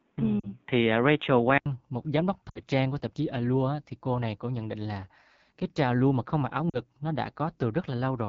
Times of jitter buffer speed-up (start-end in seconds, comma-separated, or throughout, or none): none